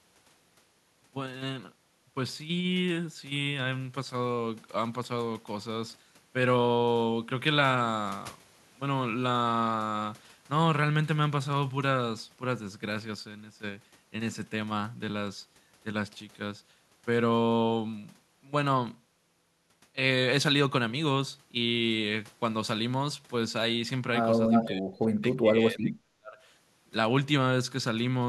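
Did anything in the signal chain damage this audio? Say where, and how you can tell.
Yes. In the call processing, the echo canceller likely mistook double talk for echo and turned the speech down. This speech suppressed in double talk dips by about 20 dB from 24.49 to 24.85 s, then drops by up to about 40 dB from 25.21 to 26.39 s.

An echo leak also reaches the call processing stage, likely because a loudspeaker echo got past one side's canceller. From 24.52 to 24.65 s a brief copy of the voice returns 344 ms late, only about 5 dB below the speech itself.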